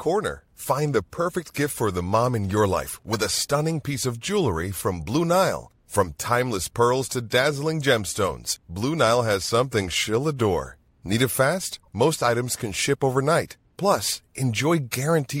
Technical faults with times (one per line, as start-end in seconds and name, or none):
1.45-1.48 corrupt frame decoded
3.13-3.17 corrupt frame decoded
11.83 corrupt frame decoded